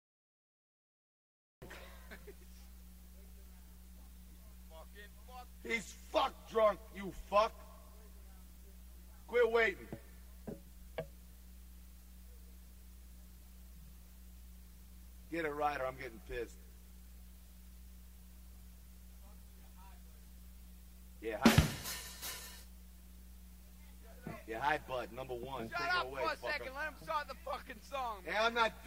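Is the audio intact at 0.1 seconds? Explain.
No. From 0 to 1.62 s there is digital silence from a cut-off start: capture began late, so at 1.62 s sound enters mid-event with no attack, unlike a dropout, which has sound on both sides.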